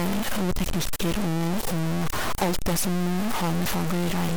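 Stuck bit, throughout the speech: noise rides on the sound and fills the pauses, likely from one data bit held fixed, offsetting about half the samples by that bit's weight.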